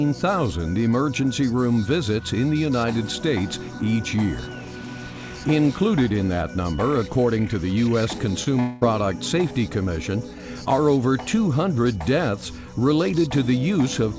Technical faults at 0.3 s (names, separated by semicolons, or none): none